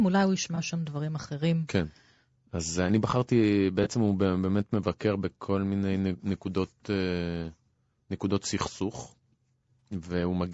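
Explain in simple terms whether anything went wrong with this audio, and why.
Low-delay AAC compression, throughout: the speech sounds rough and grainy, likely from the short-frame codec used on video calls, which captures voice pitch poorly and lets noise creep between its tones.

AAC frame loss with concealment, at 0.55–0.58 s, 3.83–3.87 s and 9.8 s: each time one chunk of audio went missing, and the decoder patched the gap from the preceding sound, leaving a brief smeared, noisy blip.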